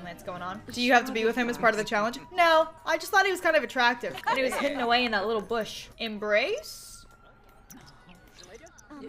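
No technical faults can be heard anywhere in the audio.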